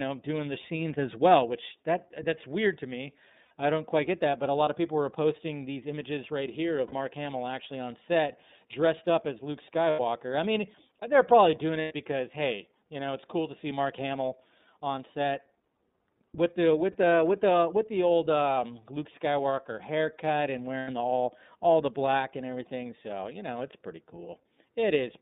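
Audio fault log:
throughout, iLBC codec: the speech has been squeezed through a narrowband VoIP coder that handles each short block of excitation on its own. The blocks sound about 30 ms long, which fits the 13.33 kbps mode. The line passes only about 150 Hz to 3.7 kHz, so the voice is thin and boxed-in. The coding roughness is plainly audible as a grainy, slightly synthetic edge on every syllable.
3.45–3.51 s, 6.87–6.93 s, 9.90–10.00 s, 11.82–11.92 s, 16.92–16.95 s, 20.79–20.88 s, lost iLBC frames: packets went missing, and the decoder filled each hole by repeating the last pitch period blended with noise. Each gap is heard as a brief held, buzzy vowel lasting 30 to 90 ms, which fits one to three dropped 30 ms frames. The following frame decodes without needing the lost ones, so normal speech returns almost instantly.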